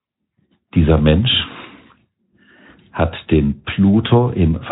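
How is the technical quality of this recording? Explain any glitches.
No audible glitches or faults.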